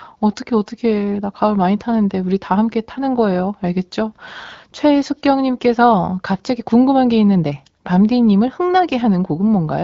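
No technical fault can be heard in this speech recording, which has passed through the AMR wideband (HD Voice) codec at 12.65 kbit/s, a rate where that codec leaves only light coding damage.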